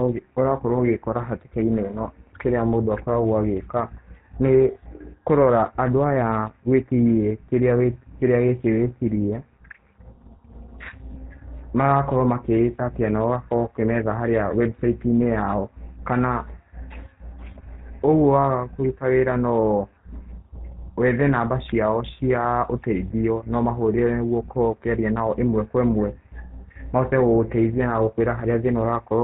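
GSM full-rate codec, throughout the clip: the speech has been squeezed through a vocal-tract model driven by regular pulses, with the excitation kept at only every third sample, and the result is plainly audible. The voice carries a buzzy, gravelly roughness and has nothing above 4 kHz, so sibilants and breath lose their edge. The coarseness of the texture fits the 13 kbps full-rate mode.

Lost GSM frames, at 11.12 to 11.16 s: a damaged stretch of the stream was patched by repeating the settings of the last good frame. This produces a brief, rough metallic ring where the speech should continue. It is very short, about 20 ms of missing audio, which points to a single lost frame. The gap is too brief for the repeated sound to fade to silence before normal decoding resumes.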